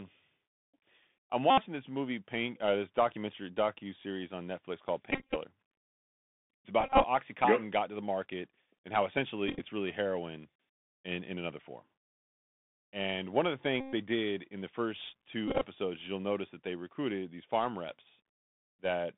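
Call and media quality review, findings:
Bluetooth CVSD headset codec, whole clip. Narrowband speech, band roughly 150 Hz to 3.6 kHz, nothing above that. Plainly audible codec damage: granular hiss under speech, scratchy s sounds, loud high content distorting where the adaptive one-bit delta step cannot keep up. Character fits 64 kbit/s CVSD on the headset link. Component: headset voice path.

Bluetooth headset packet repeated, six events: 1.50 to 1.63 s, 5.11 to 5.37 s, 6.81 to 7.05 s, 9.48 to 9.62 s, 13.80 to 13.93 s, 15.48 to 15.66 s. Symptom: short buzzy stretches, near-267 Hz drone during runs. Mechanism: lost voice packets replaced by the previous packet re-decoded, repeating every 3.75 ms. At 1.50 s and 13.80 s the buzz is continuous, about 71 ms and 124 ms. Elsewhere it is broken up, with runs of roughly 15 to 20 ms spread over 130 to 250 ms. Component: Bluetooth radio link.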